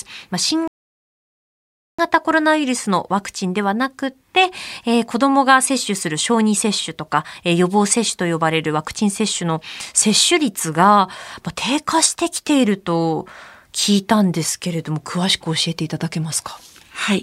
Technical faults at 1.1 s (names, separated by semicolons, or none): rebuffering stall